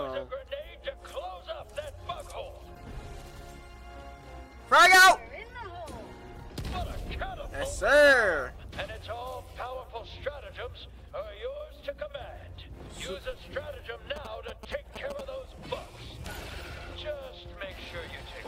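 GSM signalling bursts appear from 14.16 to 15.21 s, a galloping dit-dit-dit of short buzzes pulsing at about 217 Hz, sitting roughly 10 dB below the main sound. A 2G phone close to the recording chain was handshaking with its network, sending only brief clusters of radio bursts rather than continuous transmission, and the audio circuitry rectified that radio energy into the signal, turning each burst group into this rhythmic interference.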